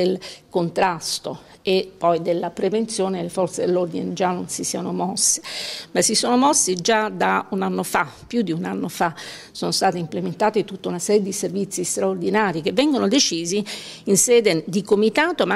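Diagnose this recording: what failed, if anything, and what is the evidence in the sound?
What failed is the digital clocking between two devices: you get word clock ticks, short sharp clicks of uneven strength, roughly every 1.5 s from 0.22 s to 15.34 s. The receiver free-runs on its own clock, around 15 ppm off, so each slip drops or repeats a sample.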